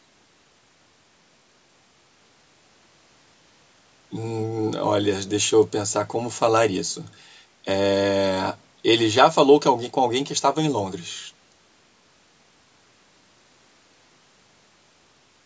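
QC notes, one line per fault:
No faults found; the speech has passed through a call's microphone processing, which leaves nothing above 8 kHz and trims the lowest bass, as expected for that path.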